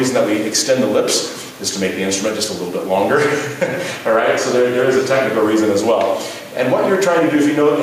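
Gain pumping runs through the whole clip. The gain swings by roughly 5 dB. Loud and soft parts sit close in level, and the sound feels squashed. Likely cause: excessive input gain feeding a fast limiter.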